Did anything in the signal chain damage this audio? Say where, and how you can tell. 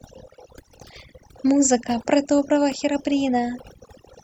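Yes. The damage comes from overdone noise removal at the call-processing stage, and it runs through the whole speech clip. Between phrases the background drops to near silence, yet small twinkling specks remain. Here the suppressor was set too hard. It pushed individual frequency bands far down whenever they sat close to its noise estimate. The quieter parts of the speech fell below that line and were removed along with the noise.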